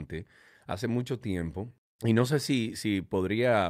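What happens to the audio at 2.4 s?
At 2.4 s the speech falls inside a run of repeated timing corrections lasting from 0.88 s to 3.51 s. The receiver keeps repeating short slices of audio to stay in step with the sender, so playback runs at about 97% of the original pace and the stretch gains roughly a tenth of a second overall. If audible at all, it comes across as slight hiccups and an unsteady tempo. On a waveform, small segments reappear back to back with abrupt seams. On a spectrogram, brief duplicated slivers and thin vertical discontinuities interrupt otherwise smooth harmonic tracks.

The cause is clock drift between sender and receiver, which runs through the whole clip. The sender's audio clock is about 3% slower than the receiver's, so the jitter buffer keeps draining and has to be padded. The corrections all go the same way, lengthening the audio, but they land at uneven intervals. 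That irregular spacing of the repeated slivers is what gives the drift away.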